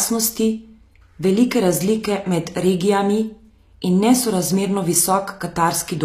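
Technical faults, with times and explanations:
Throughout, HE-AAC compression: the speech carries plainly audible coding damage, and nothing reaches above 14.9 kHz. The upper band sounds synthesised rather than captured. It is likely the work of spectral band replication, where the encoder transmits only the lower spectrum and regenerates the treble by copying lower bands upward under a coarse envelope. The rebuilt harmonics fail to line up across the crossover, so sibilants come out gritty and metallic, a pattern consistent with a low bitrate near 24 kbps.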